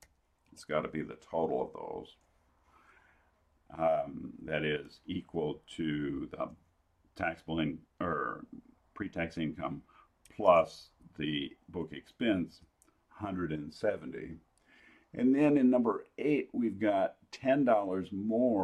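No technical faults are audible anywhere in the recording.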